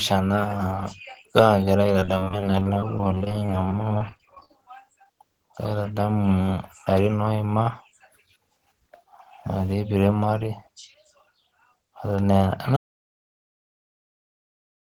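Speech with three distinct faults. From 2.00 to 4.50 s there's repeated packet loss, the robotic kind. The stream keeps losing short chunks, dozens of holes with none longer than about 23 ms. Each one gets patched by stretching the last bit of sound before the next hole arrives, so about 18% of that span is synthesized fill. That's what gives it the choppy edge, and overall roughly 390 ms of real audio never made it through. Just after that, at 5.04 s, there's a single short concealed packet loss. About 10 ms went missing and the decoder covered it by continuing the previous sound for a moment, then blended back into the real signal. It's a quick smear or wobble. Then from 12.77 s right to the end the audio drops out to silence. It's silent, with no room tone underneath, so whatever was being said after that point is simply gone. That points to the input going away while the recorder kept writing, most likely a disconnected device, a failed link or an accidental mute, rather than anything in the decoding.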